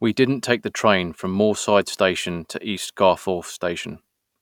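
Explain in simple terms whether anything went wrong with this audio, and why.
Nothing went wrong here: the speech signal stays steady and intact throughout, with no technical problem audible at any point.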